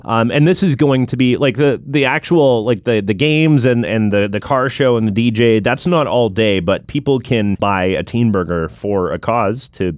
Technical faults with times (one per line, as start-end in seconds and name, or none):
none